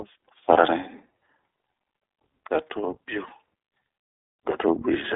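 From start to finish the speech sounds narrow, slightly rough and synthetic, with a plainly audible coded edge and nothing outside roughly 300 Hz to 3.6 kHz. This is the iLBC codec, a narrowband VoIP coder that codes each 20 ms frame's excitation independently, which fits its 15.2 kbps mode. The thin band comes from the line filtering, and the grainy, buzzy texture is the coarse modelling of the excitation.

At 0.54 s and again at 3.28 s there is a brief held, faintly buzzy smear lasting about 20 ms, after which the speech returns cleanly at once. These are lost iLBC frames, one frame each time. The decoder filled each gap by repeating the last pitch cycle with some added noise. Because every frame stands alone, the following frame decodes correctly straight away, so neither dropout leaves a trailing effect.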